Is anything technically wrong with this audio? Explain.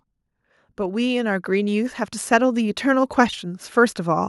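Yes. Automatic gain rising runs from 0.76 s to 4.24 s: the gain control judged the input too quiet and lifted its gain by about 11 dB over those three and a half seconds, so the voice and the background noise swell upward together.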